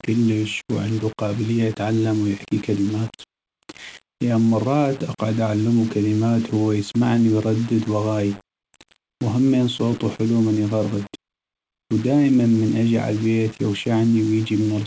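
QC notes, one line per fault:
Throughout: low bit depth without dither. The speech carries a grainy, gritty distortion that shifts as the sound changes. It sits only about 20 dB below the signal. Quiet passages sound rough and broken. The likely cause is rounding to very few levels with no dither, which fits about 5 bits. The error tracks the waveform, so it sounds grainy. The call path's top end stops at 8 kHz.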